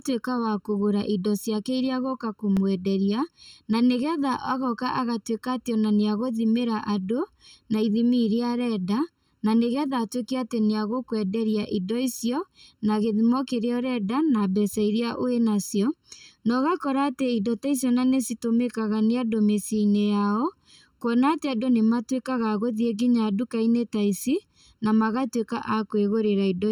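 Channel delay (comb filtering) runs through the whole clip: one channel trails the other by about 0.7 ms, and summing them to mono cancels shared content at evenly spaced frequencies, the first notch near 700 Hz, leaving the speech hollow and phasey throughout.

A block of digital silence at 2.57 s drops the signal out for 1.33 ms, which fits a 64-sample buffer left unfilled in time. The abrupt cut and return with no fade produce a tick rather than an audible hole.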